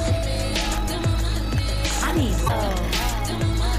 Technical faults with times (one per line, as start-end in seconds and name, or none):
2.44-2.50 damaged data in a compressed stream